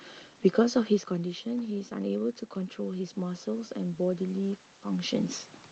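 Automatic gain rising from 1.09 to 5.23 s: after the input drops about 10 dB, the gain creeps up about 4 dB, swelling the voice and room noise together.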